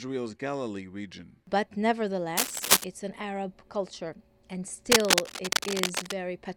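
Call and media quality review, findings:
Cable scratch noise, 2.37–2.84 s and 4.92–6.15 s: dense, uneven scratching bursts riding above the sound, a few dB louder than it. Likely a worn cable, connector or control being moved, contact resistance fluctuating rapidly.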